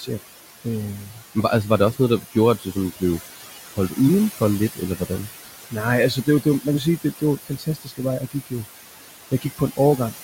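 Noise suppressor artifacts run through the whole recording. The suppressor pulls the bands it judges to be steady noise down by about 15 dB, frame by frame. The room noise, which sits only about 11 dB below the speech, therefore sinks in the gaps and climbs back up under each phrase.

Speech cut by the noise suppressor occurs at 0.0–0.21 s, 1.04–1.36 s, 1.93–3.02 s, 4.76–5.73 s, 6.15–8.53 s and 9.31–9.99 s. In each span the suppressor mistakes quiet parts of the speech for noise and turns them down with the background, by about 8 dB at the mildest and about 18 dB at the deepest. Only brief fragments are hit, from around a tenth of a second up to most of a second within the 6.15–8.53 s stretch. The affected parts sound swallowed or faint.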